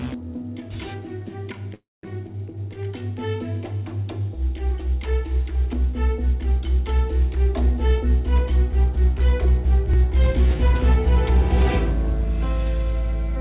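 At 1.74 to 2.05 s a call audio freeze leaves a brief decaying buzz or hiss, then about 0.2 s of silence, likely from delayed packets. A spectrogram shows a smeared fade, then a blank gap.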